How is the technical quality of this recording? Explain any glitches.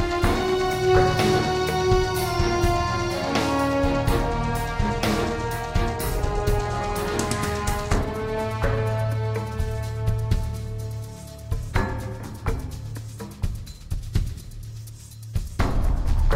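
The technical quality of this recording is sound, with no glitches to explain.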